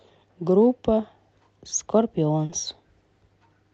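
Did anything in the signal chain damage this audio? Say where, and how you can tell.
Yes: packets were lost on the network stage of the call, and the receiver papered over the gaps with short concealed packet loss. About 20 ms went missing at 1.69 to 1.73 s and about 40 ms at 2.45 to 2.51 s. The decoder extended the preceding speech and crossfaded back, which leaves brief smears or wobbles there.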